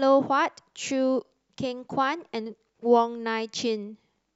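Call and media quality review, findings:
Nothing stood out on listening to this speech recording.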